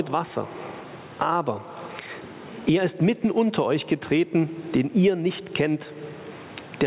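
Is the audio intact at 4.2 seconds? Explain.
No. At 4.2 seconds, as through the whole clip, there's gain pumping. The gain swings by about 20 dB, so loud and quiet parts are squashed toward the same level. The likely cause is input gain set far too high, with a fast limiter or compressor clamping down on each peak. The narrow top end, nothing above 4 kHz, fits the G.711 call path.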